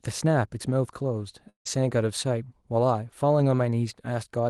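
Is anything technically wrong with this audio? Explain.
Yes. From 1.49 to 1.67 s the speech breaks off. About 160 ms of audio is lost, and the gap is filled with a fading buzzy continuation of the last sound before it goes quiet. This is likely a long network dropout, where the receiver's concealment extrapolated the final sound until it decayed, and the audio then resumes without the missing part.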